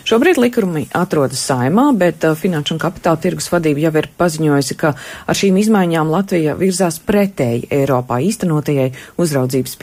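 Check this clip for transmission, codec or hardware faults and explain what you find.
Nothing in the clip points to a transmission, codec or hardware fault. No dropouts, gaps, glitches or level jumps can be heard anywhere in the recording.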